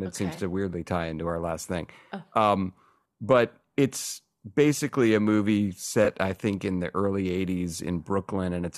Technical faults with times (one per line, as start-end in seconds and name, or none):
0.35-0.39 corrupt frame concealed
6.04-6.08 corrupt frame concealed